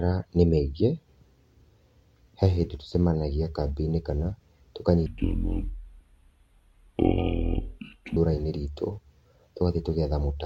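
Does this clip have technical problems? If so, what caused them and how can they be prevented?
Yes. From 5.06 to 8.17 s a section at the wrong speed plays at 0.58x, dropping pitch about ten semitones; harmonics on a spectrogram sink and stretch, likely from a mismatched playback or editing clock. Prevent it by checking that every section's sample rate matches the project rate before export.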